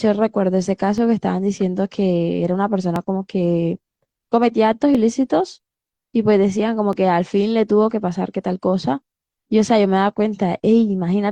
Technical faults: overlap between stream segments

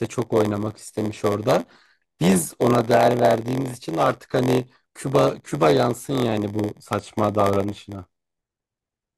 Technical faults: block size mismatch (padded)

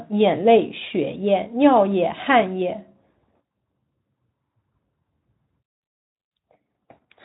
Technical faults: none

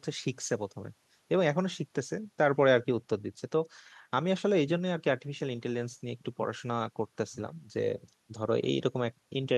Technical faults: none

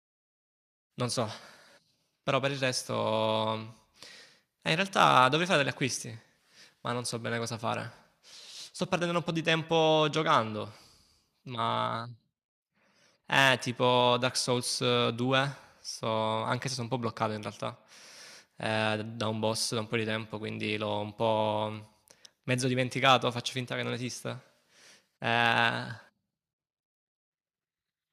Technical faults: none

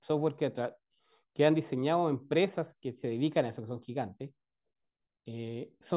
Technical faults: none

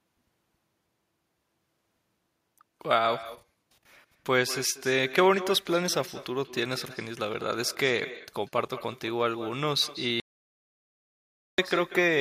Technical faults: echo with no canceller; audio dropout to silence

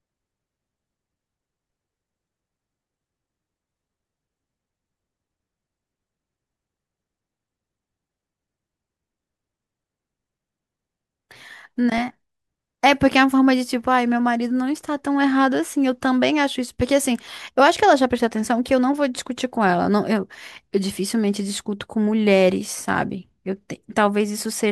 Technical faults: channel delay (comb filtering)

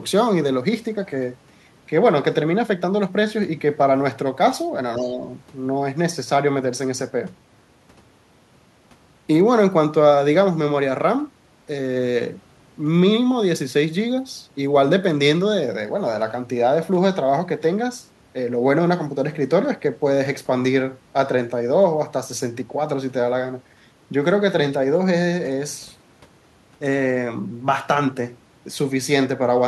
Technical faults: other side's voice leaking through; speech suppressed in double talk

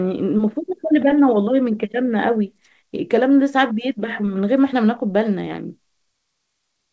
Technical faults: clock drift between sender and receiver; repeated timing corrections

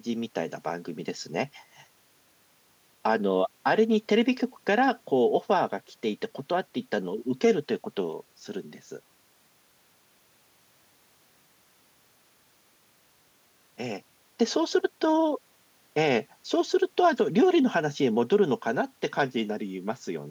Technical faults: none

